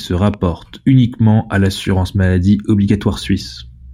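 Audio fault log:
0.34–0.36 s, loud pop: a single sharp pop lands just before "uniquement à l'assurance maladie", likely a voltage step from a plug, switch or static discharge, peaking several decibels above the speech. The waveform shows a brief spike; the spectrogram shows a thin vertical broadband stripe.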